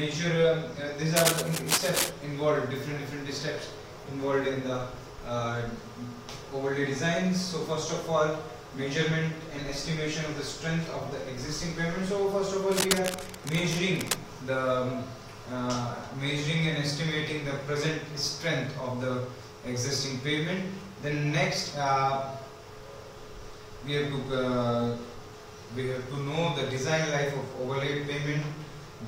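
From 1.16 to 2.09 s, and again from 12.72 to 14.16 s, cable scratch noise breaks in as dense, ragged crackling. It likely comes from a worn connector or cable shifting and flickering its contact resistance. The first burst sits at roughly the signal's level and the second about 5 dB lower. On a spectrogram each appears as irregular broadband speckle, and on the waveform as jagged, uneven spikes.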